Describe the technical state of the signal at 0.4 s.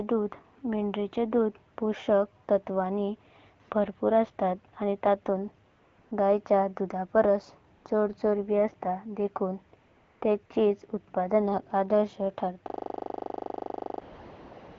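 At 0.4 s the speech is intact, with no fault to be heard, and the AMR wideband (HD Voice) codec carrying it, at a rate that fits 12.65 kbit/s, keeps it clear.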